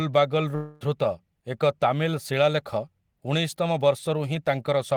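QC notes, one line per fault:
0.55 to 0.83 s, long network dropout: the speech gives way to a smeared buzz that stretches the last sound for about 250 ms and fades without reaching silence, then resumes with roughly a quarter second missing. This is likely a dropout concealed by the receiver, not a brief packet-loss click or a plain mute.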